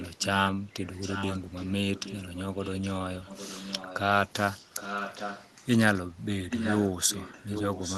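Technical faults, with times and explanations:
0.0–0.25, 0.86–1.73, 1.95–2.91, 3.23–3.98, 4.75–5.66, 6.5–6.88 and 7.08 s to the end: echo leak. A fainter copy of the speech returns about 814 ms late, somewhere between about 15 dB and 5 dB below the speech, loudest around 4.75–5.66 and 6.5–6.88 s. This is likely a far-end loudspeaker whose echo canceller let part of the signal back. On a spectrogram, faint harmonic patterns repeat the earlier speech shifted right by 0.81 s. The waveform shows low-level energy filling the pauses.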